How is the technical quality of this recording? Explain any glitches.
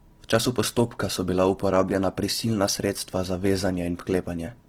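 The recording carries plainly audible codec damage for its whole length. Throughout, the speech sounds grainy and rough, with noisy texture replacing clean tone. This is likely Opus compression in its music mode: starved bands get filled by folding or noise, which fits roughly 16 kbps, though bandwidth stays full to about 20.3 kHz.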